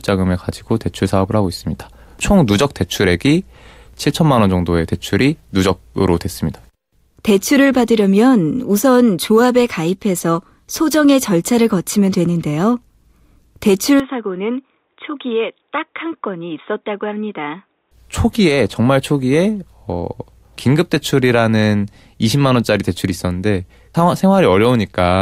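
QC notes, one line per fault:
14.00–17.91 s, input switched to a poorer device: the speech abruptly turns dull and boxy, with nothing above 3.8 kHz, drops about 10 dB in level and gains a faint new noise floor, with no gap at either switch, likely a change to a narrower-band microphone.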